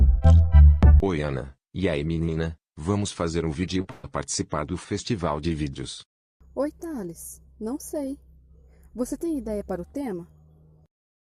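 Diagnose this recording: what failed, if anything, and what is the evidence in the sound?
Network stage, short concealed packet loss: two brief smears at 3.81 to 3.84 s and 3.84 to 3.86 s, each covering about 10 ms of missing audio. The receiver's concealment extended the preceding sound across each hole, then crossfaded back into the real signal.

Network stage, burst of packet loss: at 3.91 to 4.04 s the sound turns into a held, decaying continuation lasting about 127 ms, with no silence. Roughly 130 ms of audio never arrived, so playback resumes further along.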